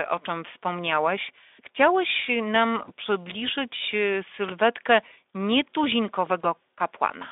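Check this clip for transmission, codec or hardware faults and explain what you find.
Two brief transmission faults occur, both VoIP packet loss concealed by the speech codec. The first spans 2.85–2.90 s, just before "przybliżyć sylwetkę"; the second spans 6.42–6.44 s. Each gap fits one lost 20 ms frame. The decoder repeats its last pitch and spectral envelope at falling gain, so the sound smears into a short buzzy tone or coloured noise that fades, rather than a hard silent dropout or click. It stays weak or distorted for tens of milliseconds or more after audio resumes, through the band-limited Speex path.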